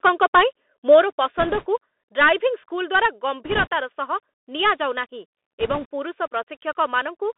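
Throughout, the sound is carried by the Bluetooth CVSD headset codec, band-limited to roughly 250 Hz to 3.6 kHz, with a granular hiss and scratchy sibilants consistent with a 64 kbps one-bit delta stream. From 0.05 to 0.41 s and again from 0.91 to 0.96 s, peaks flatten with a harsh crackle, which sounds like microphone overload, likely from input gain about 4 dB and about 1 dB too high. At 1.02 s the level drops abruptly by 5 dB, a microphone volume step-down, likely as the software reacts to the clipping. Bit errors on a Bluetooth voice link, at a rate of a few percent, produce bursts of rushing crackle without loud clicks from 1.38 to 1.67 s, 3.45 to 3.67 s, and 5.60 to 5.86 s.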